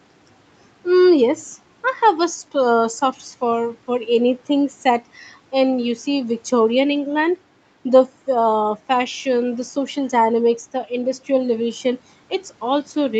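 No technical faults can be heard in this speech; it has the restricted top end of a call path, with nothing above about 8 kHz, which fits a wideband Opus setting, and the lowest bass is trimmed as the call's microphone processing normally does.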